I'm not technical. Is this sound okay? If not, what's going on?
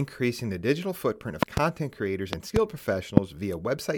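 No. There are loud pops at 1.43 to 1.6 s (a double), 2.33 to 2.59 s (a double) and 3.17 to 3.2 s, likely sudden electrical jolts from a plug, switch or static, thumping over the speech, which continues underneath.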